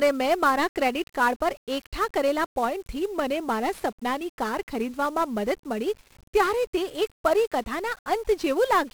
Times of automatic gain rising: none

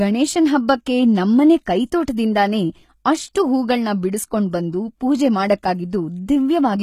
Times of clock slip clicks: none

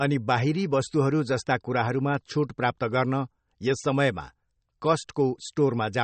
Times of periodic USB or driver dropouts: none

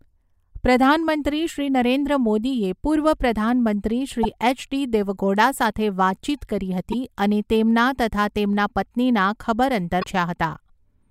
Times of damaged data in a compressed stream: 4.23-4.25, 6.92-6.94, 10.00-10.04

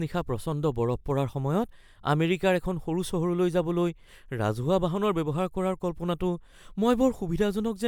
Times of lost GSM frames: none

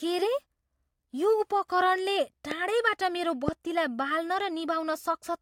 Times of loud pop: 2.51-2.53, 3.48-3.50

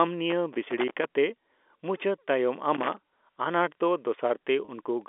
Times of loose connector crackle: 0.30-1.08, 2.75-2.97

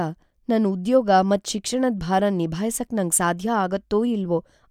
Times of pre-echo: none

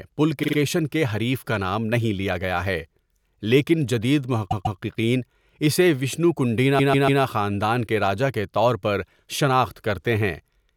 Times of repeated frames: 0.42-0.56, 4.50-4.79, 6.78-7.21

